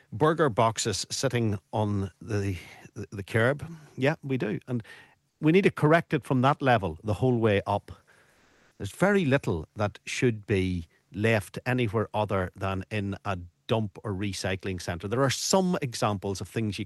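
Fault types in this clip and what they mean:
Comfort noise in place of the background: The sender most likely stopped transmitting during a pause under Opus discontinuous transmission, so the receiver filled the gap with generated noise. From 8.35 to 8.71 s, about 360 ms, the faint background, sitting about 44 dB below the loud parts, is swapped for a smooth, featureless hiss whose level is shifted by about 4 dB. That makes a brief seam before the real background returns, heard through the call codec's roughly 12 kHz band limit.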